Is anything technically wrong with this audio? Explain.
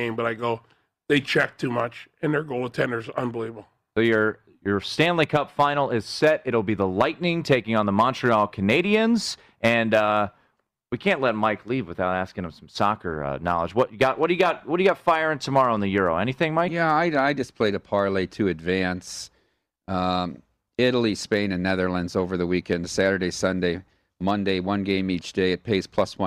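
No, nothing in this speech recording stood out as a technical problem on listening.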